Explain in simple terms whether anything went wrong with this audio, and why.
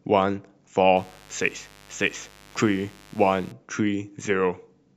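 A mains buzz runs under the speech from 0.97 to 3.52 seconds: a steady, raspy hum from 50 Hz electrical interference leaking into the recording.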